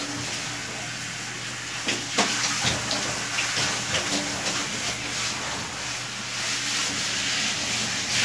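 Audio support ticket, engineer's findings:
Findings: no faults heard in this sound clip.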